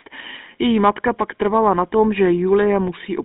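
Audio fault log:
Throughout: GSM full-rate codec, with a gritty, buzzy roughness from the pulse-driven vocal-tract model, and the sound squeezed into roughly 200 Hz to 3.7 kHz.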